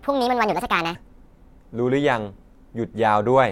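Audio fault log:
0.00–0.95 s, section at the wrong speed: the opening speech runs at 1.58 times its proper rate, so it sounds hurried and raised in pitch by about seven semitones before settling to normal speed, likely from this stretch being played against a mismatched clock.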